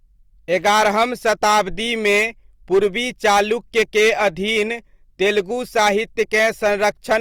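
From start to finish the speech is hard clipped. The signal arrives at a stage roughly 10 dB hotter than that stage can pass, so every peak above the ceiling is sliced flat, affecting a few percent of the samples. Those squared-off tops generate harmonics well above the natural spectrum. The result is a gritty, harsh fuzz riding on each louder syllable and a crackle at the strongest peaks.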